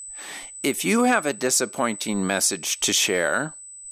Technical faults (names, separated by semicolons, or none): USB whine